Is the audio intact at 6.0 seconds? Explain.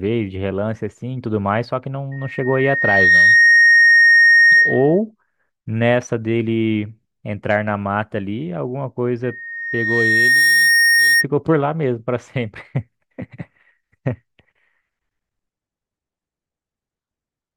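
No. At about 6.02 s the speech jumps ahead by roughly one compressed frame, about 20 ms, which fits a 23.2 ms frame. These are compressed frames skipped.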